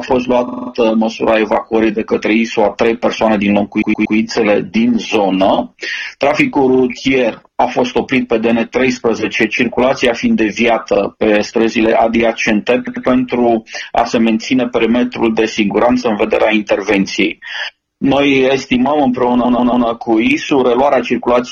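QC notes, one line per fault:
0.47–0.70 s, 3.81–4.16 s, 6.74–6.83 s, 10.94–10.99 s, 12.87–13.05 s and 19.44–19.86 s, repeated frames: short chunks of the coded stream get played again, so each spot stutters. The looped block is 46 ms at 0.47, 6.74 and 10.94 s, 93 ms at 12.87 s, 116 ms at 3.81 s and 139 ms at 19.44 s. It repeats one to five extra times. The clip is longer by the repeated time, about 0.42 s in the worst run.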